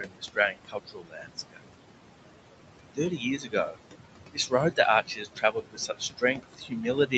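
A noise suppressor runs across the whole clip, pulling down what it judges to be steady background by about 21 dB in each frame. The room noise, sitting about 9 dB under the speech, drops away in the gaps and swells back under talking.

The same suppressor also mistakes parts of the speech itself for noise. From 0 to 1.69 s, about a second of speech is turned down by up to about 22 dB. From 2.83 to 3.78 s, roughly half a second drops by up to about 21 dB. At 4.33 to 4.53 s, a brief tenth of a second dips by about 18 dB. From 5.04 s to the end, speech falls by up to about 21 dB. In each span, the affected speech sounds swallowed or faint.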